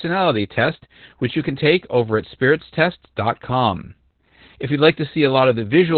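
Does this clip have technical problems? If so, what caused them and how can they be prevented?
Yes. The speech throughout shows heavy Opus voice compression. The SILK coder runs narrowband, so nothing is heard above about 4.3 kHz. The coarse excitation coding makes the voice muffled, hoarse and slightly robotic, which fits a very low rate near 8 kbps. Encoding at a higher bitrate with wideband or fullband enabled prevents this.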